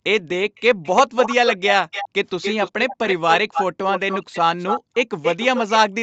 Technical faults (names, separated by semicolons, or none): echo leak